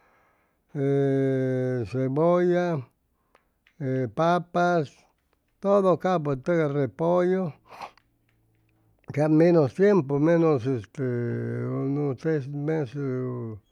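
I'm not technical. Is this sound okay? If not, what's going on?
Yes, there's nothing wrong with this recording.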